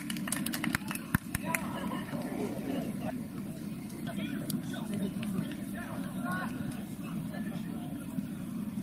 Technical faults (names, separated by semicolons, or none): none